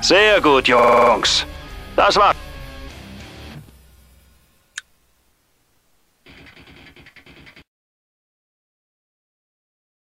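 A system hang loop runs from 0.79 s to 1.12 s. For that stretch the playback side stopped supplying fresh audio while the sound hardware kept reading the same ring buffer, so one 46.4 ms slice, which fits a 2048-sample buffer, plays seven times in a row. Repeating at 21.5 Hz, it comes across as a fast, rattling stutter. When normal playback resumes, almost nothing appears to have been skipped.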